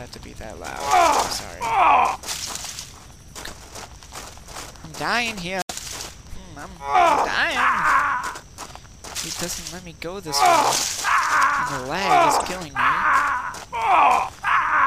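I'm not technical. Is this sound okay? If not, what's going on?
No. At about 5.61 to 5.71 seconds there is damaged data in a compressed stream. A small stretch of the stored or transmitted file got corrupted, so the player couldn't read that piece properly. It lost its place and had to hunt for the next readable chunk before carrying on. You hear this as a brief chirp, squawk, click or short hole, about a tenth of a second long, cutting into the sound at that moment.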